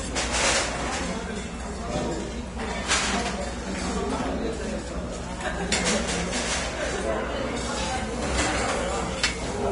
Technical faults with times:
0.00-9.71 Vorbis compression

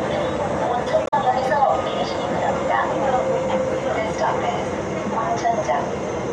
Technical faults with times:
1.03-1.14 damaged data in a compressed stream

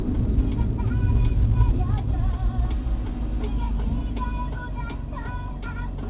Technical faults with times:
none

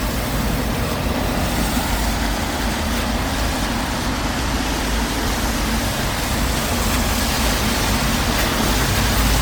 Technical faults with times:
0.00-9.42 generation loss

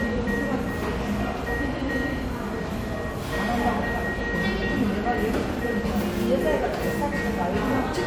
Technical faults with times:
none

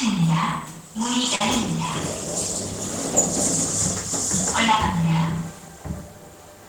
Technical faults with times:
1.35-1.41 burst of packet loss

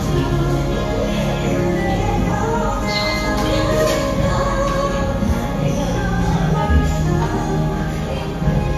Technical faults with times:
2.81 damaged data in a compressed stream
4.88 damaged data in a compressed stream

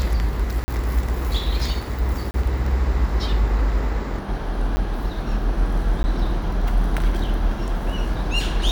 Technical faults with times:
0.64-0.68 block of digital silence
2.31-2.34 block of digital silence
4.19-8.71 section at the wrong speed
4.76 block of digital silence
6.03 block of digital silence

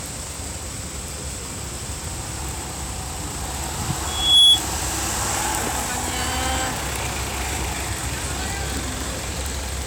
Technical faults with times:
4.06-4.62 loudspeaker feedback squeal

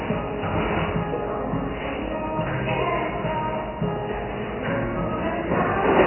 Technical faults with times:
0.00-6.07 MP3 compression

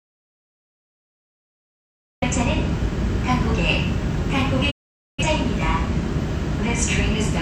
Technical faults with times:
0.00-2.22 audio dropout to silence
4.69-5.23 digital broadcast dropout

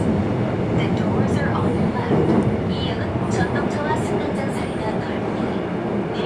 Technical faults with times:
none

